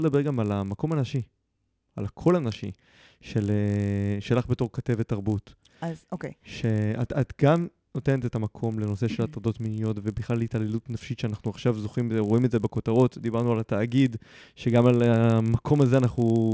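Throughout the speech, the resampler restarted on every block. Each 20 ms block was converted in isolation during a 44.1 kHz to 16 kHz downconversion, leaving a small error at every block edge. Those errors repeat at 50 Hz, giving a buzz that rides under the voice and disappears in pauses.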